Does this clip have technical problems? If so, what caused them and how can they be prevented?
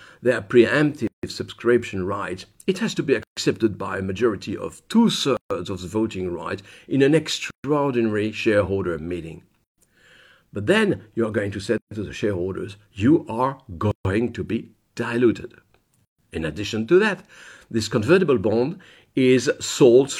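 Yes, there's a gap at a join of encoded pieces at 1.07, 3.23, 5.37, 7.51, 9.64, 11.78, 13.91 and 16.05 s. The speech drops out for about 136 ms each time, 158 ms at the first, and then resumes where it left off. It fits 2-second chunks encoded separately and glued together with each run's start-up delay and last-frame padding left in. To prevent it, encode the audio in one pass, or trim each piece's encoder delay and padding before joining them.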